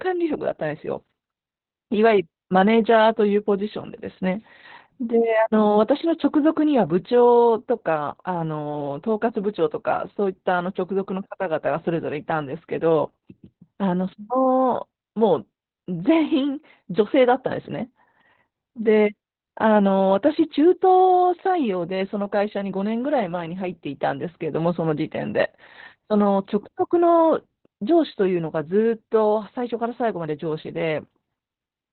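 This speech clip suffers Opus voice compression throughout. Nothing survives above about 4.2 kHz, so it sounds muffled and narrowband. The SILK coder's coarse excitation makes it hoarse and slightly robotic. That heavy damage fits a bitrate near 8 kbps.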